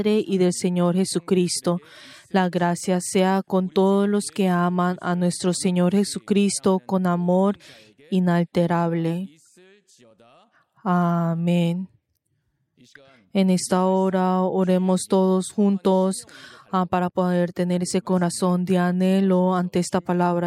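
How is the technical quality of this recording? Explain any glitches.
No technical glitches can be heard anywhere in the recording. There is nothing here that calls for explanation.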